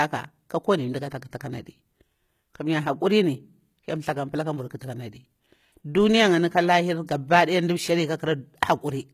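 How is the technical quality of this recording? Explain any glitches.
The recording carries plainly audible codec damage across the whole clip. HE-AAC compression, throughout: the speech sounds gritty and metallic in the treble, and nothing is present above about 14.9 kHz. The likely cause is HE-AAC coding, which transmits only the lower spectrum and synthesises the upper bands by copying lower content upward under a coarse envelope. The rebuilt highs don't match the real harmonics, so s sounds turn rough and lispy. The degree of damage fits a low bitrate of around 20 kbps.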